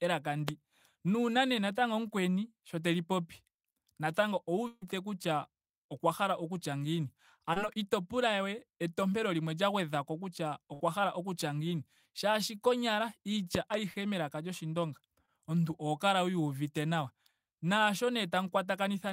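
Right at the start, 0.48 to 0.51 s, there's a loud pop, a single sharp spike roughly 20 dB above the speech while the talking carries on underneath. That's likely a voltage transient, say a plug or switch click, getting into the signal. At 4.67 to 4.83 s comes a burst of packet loss. The receiver stretches the last bit of sound for about 140 ms, fading it out with a brief 10 ms dropout, and then jumps ahead, so about 140 ms of speech is simply gone. A short concealed packet loss follows at 7.53 to 7.58 s, where roughly 20 ms never arrived and got patched by continuing the previous sound. You hear it as a quick smear before the real audio blends back in. Another burst of packet loss hits at 10.74 to 10.82 s. It's the same held-then-faded fill, this time about 58 ms, covering around 60 ms of missing speech. At 13.55 to 13.76 s there's a loud pop again, actually two thumps in quick succession, peaking roughly 15 dB above the speech, likely another electrical glitch. 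Two more short concealed packet losses land at 13.94 to 13.98 s and 15.26 to 15.29 s. Each is about 20 ms of missing audio filled in from the preceding sound, heard as a tiny wobble.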